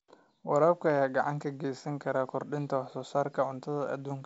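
Nothing stood out on listening to this speech, which comes through the G.722 wideband telephone path with its content stopping at about 7.7 kHz, as that coding does.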